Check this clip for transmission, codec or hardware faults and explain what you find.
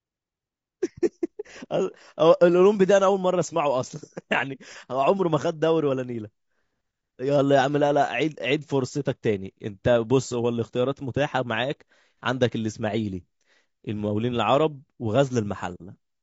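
One codec fault runs through the whole clip. Throughout, the speech has likely passed through low-delay AAC compression, with a damaged sound that fits AAC-ELD at around 32 kbps. Its short frames resolve pitch harmonics poorly and leave too few bits, so the speech sounds plainly rough and grainy, with noise filling the gaps between harmonics and a dulled, synthetic-sounding top band.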